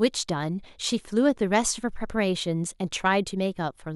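No technical faults can be heard anywhere in the speech recording, so there is nothing to place on a timeline.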